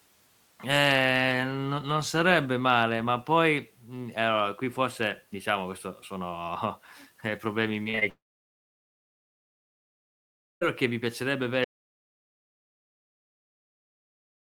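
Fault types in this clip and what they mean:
Repeated packet loss (robotic sound): four short holes between 7.83 and 8.03 s, none longer than about 41 ms, each patched over, giving choppy fragments with pieces missing rather than one long gap.
Long network dropout: from 8.09 to 10.63 s the patched-over sound fades within about a tenth of a second, leaving about 2.4 s of quiet before "che mi piacerebbe avere", likely from lost network audio.
Audio dropout to silence: from 11.64 s after "che mi piacerebbe avere" to the end, the sound drops to complete silence without fading or room tone, likely from a lost input.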